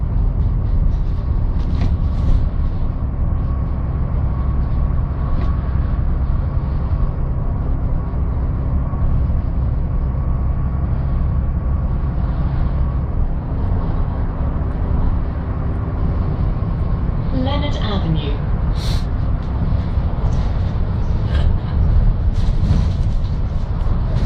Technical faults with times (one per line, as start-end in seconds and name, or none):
none